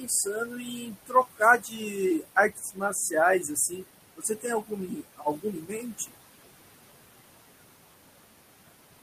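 Throughout the clip, a noise suppressor is pulling down whatever it judges to be steady noise by about 20 dB. The room noise, sitting about 12 dB under the speech, sinks in the gaps and swells back under the talking. This leaves noise suppressor artifacts.

The same suppressor mistakes parts of the speech for noise and turns them down with the background. This happens at 0.0 to 1.41 s (drops of about 17 dB), 1.58 to 1.97 s (about 13 dB), 2.19 to 3.14 s (about 19 dB), 3.42 to 3.84 s (about 10 dB), 4.16 to 4.46 s (about 20 dB) and 4.62 to 6.11 s (about 19 dB). Within each span, roughly 150 to 700 milliseconds of speech sound swallowed or faint.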